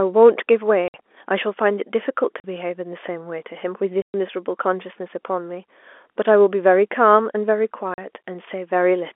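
At 0.88 to 0.94 s, 2.40 to 2.44 s, 4.02 to 4.14 s and 7.94 to 7.98 s, packet loss filled with silence cuts dead holes of 60, 40, 120 and 40 ms into the telephone-band speech, which points to 20 ms packets. The hard edges and true silence, with no smeared or repeated sound, set it apart from concealed loss.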